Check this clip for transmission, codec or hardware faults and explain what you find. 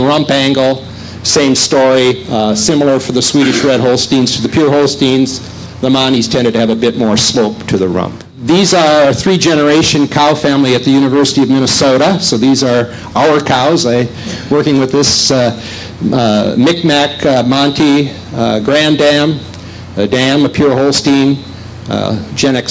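One hardware-side fault runs through the whole clip: gain pumping. Throughout, the level swings by around 10 dB, ducking on each loud sound and recovering between them, so loud and soft passages sit closer together and the sound is squashed. The likely cause is input gain set far too high, with a fast limiter or compressor clamping down on every loud moment. The call's microphone processing is audible as content stopping at 8 kHz.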